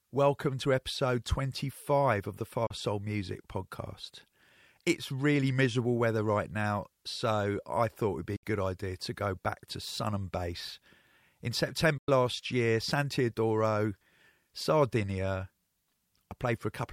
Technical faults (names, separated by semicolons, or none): digital broadcast dropout